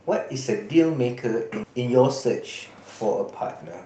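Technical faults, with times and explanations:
1.63–1.71 s, skip ahead: the sound jumps abruptly forward, losing roughly 0.7 s, with the two sides butted together almost seamlessly. That stretch was dropped, either on the way or by the jitter buffer when it overflowed, while later audio was already queued, so playback skipped ahead, shrinking the delay.
2.21–2.65 s, jitter buffer speed-up: the sound briefly rushes, running about 9% fast while the pitch stays unchanged. Having built up excess delay, the receiver repeatedly cut out tiny pitch-period pieces, removing roughly 50 ms in total to tighten playback.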